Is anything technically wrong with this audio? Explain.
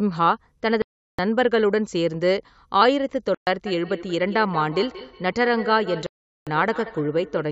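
Yes, there are two separate problems in this speech.

First, the sound drops to silence three times: 0.82 to 1.19 s, 3.35 to 3.47 s, and 6.06 to 6.47 s, gaps of about 0.37, 0.12 and 0.40 s. That's likely a Bluetooth stall, where interference delays packets, the headphone buffer runs empty, and playback freezes until the resent audio catches up.

Second, from 3.66 s to the end there's feedback echo between two devices. One device is playing the other's call audio into a shared room, and that microphone picks it up again. Its echo canceller can't remove sound from another device. You hear each bit come back roughly every fifth of a second, at most about 14 dB below the speech. The call microphone processing caps everything at 8 kHz, and that's normal for a call.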